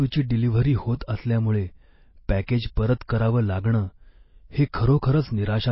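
Speech runs through the whole clip with plainly audible codec damage. Nothing is present above 5.6 kHz. The likely cause is MP3 compression at a very low bitrate, around 24 kbps. Starved of bits, the encoder cut the treble and dropped weaker frequency detail.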